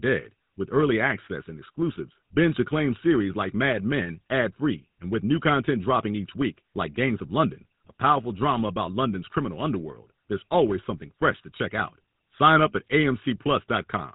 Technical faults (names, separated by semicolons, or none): GSM full-rate codec